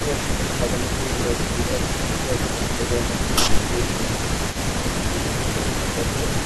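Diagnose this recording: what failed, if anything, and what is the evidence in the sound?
A delayed copy of the speech trails the direct sound through the whole clip, from 0.0 to 6.45 s. It sits about 0.27 s behind the original, roughly 10 dB below it. That is an echo leak in the call processing stage. The far end is most likely playing the call over a loudspeaker, and its echo canceller is not removing all of what its microphone picks up. The residue returns with a fixed round-trip delay.

The speech also dips briefly in five places: 1.0–1.15 s, 1.53–1.69 s, 2.43–2.9 s, 3.68–4.22 s and 5.13–5.58 s. Most dips are shallow, a few decibels. The one at 3.68–4.22 s goes deeper, around 10 dB. This is speech suppressed in double talk, again in call processing. With both sides active, the likely cause is that the echo canceller cannot tell its own talker from the returning echo, so it attenuates everything.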